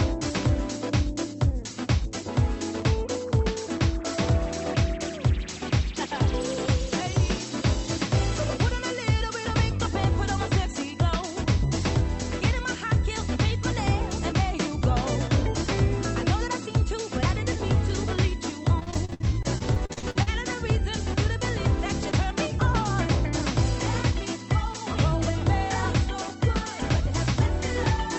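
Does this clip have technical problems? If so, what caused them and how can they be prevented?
Yes, there's repeated packet loss (robotic sound) from 18.79 to 20.29 s: a burst of short dropouts, the longest about 58 ms, each patched by stretching the previous sound. Nearly a third of that stretch is concealed, so it turns choppy. A steadier network link, or stronger forward error correction on the call path (this one sounds like Opus, topping out around 8 kHz), would prevent it.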